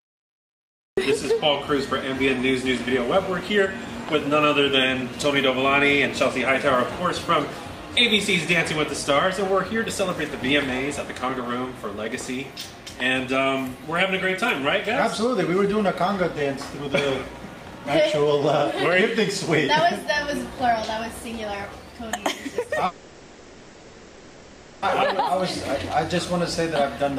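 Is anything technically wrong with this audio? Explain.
Yes, there are two faults.

From 22.85 to 24.84 s there is a call audio freeze. For about 2 s the last sound is continued as a fading buzz or hiss, and then the audio resumes where it stopped with nothing lost. This likely comes from delayed packets draining the jitter buffer. On a spectrogram it appears as smeared, flat horizontal bands.

From 26.32 s to the end at 27.18 s there is a jitter buffer speed-up. The receiver trims repeated pitch-period slices, about a tenth of a second in total, so the sound runs at 110% speed without any change in pitch. In the waveform, whole cycles are missing, with tiny splice points.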